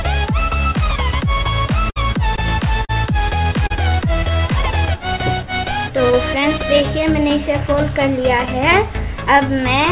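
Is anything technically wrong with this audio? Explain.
Yes, there are three kinds of trouble here, all of the network-and-timing sort, heard through a narrowband call path where nothing reaches above 4 kHz.

First, a burst of packet loss from 1.90 to 1.98 s. About 60 ms of audio never made it in time, so the receiver stretched the last bit of sound to cover the hole and faded it down as it went. You hear a brief held buzz or hiss that dies away, and then the audio picks up a little further along, with that stretch simply gone.

Second, clock drift buffer slips. From about 2.2 s to 9.85 s there's a click or pop every 2.55 s, around four in all. That steady rhythm most likely comes from two devices whose clocks disagree by something like 150 parts per million. The buffer between them slowly creeps until it has to drop or repeat a small block of samples, roughly fifteen or so, and each correction produces that regular tick.

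Third, short concealed packet loss at 2.36 to 2.39 s, 2.85 to 2.91 s and 3.67 to 3.72 s. Each time a few hundredths of a second went missing, between 20 and 40 ms, and the decoder patched it by carrying the previous sound forward before blending back into the real signal. These come across as quick smears or wobbles, and a short sound can get swallowed entirely.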